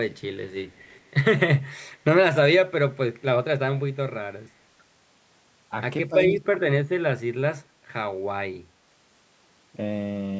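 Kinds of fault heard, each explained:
Echo leak: A very faint copy of the speech trails 201 ms behind around 0.7 to 1.1 s, likely loudspeaker pickup the echo canceller failed to remove.
Speech suppressed in double talk: The speech dips sharply in brief pieces at 6.08 and 6.39 s, likely the echo canceller turning the talker down while the other side spoke.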